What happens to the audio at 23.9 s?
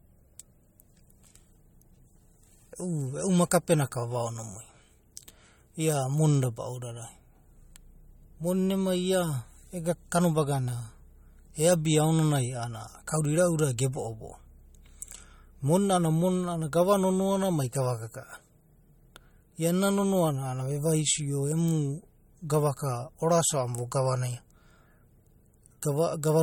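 At 23.9 s the speech carries the same damage heard through the whole clip, likely from MP3 compression. Nothing is present above about 17.3 kHz, where the encoder has cut the treble. Weak frequency lines drop in and out between frames. That gives a watery, swirling texture. S sounds turn metallic and chirpy, and sharp onsets smear. The damage is plainly audible, which points to a low bitrate, around 48 kbps.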